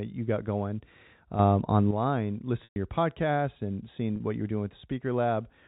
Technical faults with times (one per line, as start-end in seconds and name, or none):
1.39-1.91 sudden gain jump
2.64-2.76 packet loss with pitch repetition
4.16-4.20 packet loss with pitch repetition